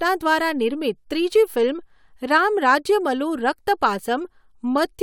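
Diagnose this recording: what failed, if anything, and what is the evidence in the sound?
Nothing failed, and the sound of this recording gives no evidence of a fault at any stage.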